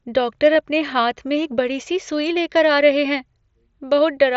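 At 0.54 s there's a brief concealed Bluetooth headset packet loss, about 15 ms, likely two dropped packets, patched over with repeated waveform, which comes out as a short buzzy tone with a small warble where the real audio returns.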